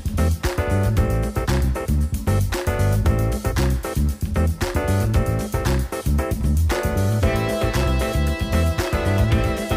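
No technical faults are audible.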